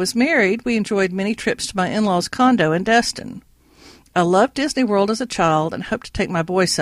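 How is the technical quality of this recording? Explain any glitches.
The recording has one glitch running through nearly all of it: clock slip clicks, from 0.22 s to 6.67 s. Faint ticks recur about every fifth of a second, around thirty in all, each the size of a single dropped or repeated sample. The likely cause is two devices running on separate, unsynchronised clocks. The gap builds to a whole sample at a steady pace, which points to a mismatch of roughly 100 parts per million. The ticks are clearest under louder, sustained parts of the speech.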